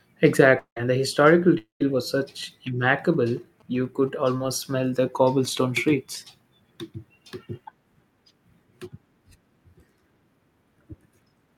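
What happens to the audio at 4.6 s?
At 4.6 s the sound carries GSM signalling bursts, running from 2.43 to 5.04 s, just before "cobblestone streets". A nearby 2G phone's intermittent radio bursts are rectified into a galloping dit-dit-dit of short 217 Hz buzzes, well below the speech, unlike steady mains hum.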